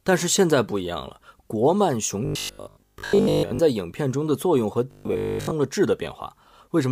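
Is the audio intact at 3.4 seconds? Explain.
No. From 2.25 to 3.59 s the speech becomes a rigid, metallic buzz fixed at 50 Hz: robotic sound from repeated short buffers. Audio likely arrived too seldom, so a 20 ms stretch was replayed in place of most of the real signal.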